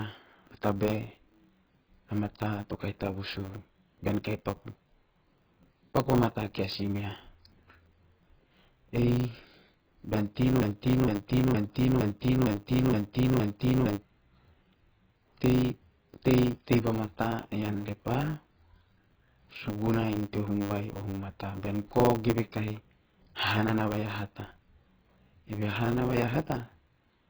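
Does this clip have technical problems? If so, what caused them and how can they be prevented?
Yes. Heavy AAC compression dulls and smears the speech throughout, with warbling sibilants; the likely cause is AAC-LC at about 12 kbps. Encode at a higher bitrate.

A block size mismatch (truncated) discards each block's tail, causing a 100 Hz buzz and speech running 1.09 times fast. Match block sizes between stages.

A broken-record loop from 10.62 to 14.02 s repeats a 0.5 s fragment seven times, losing that audio, likely from a stalled stream. Add buffering and stall detection.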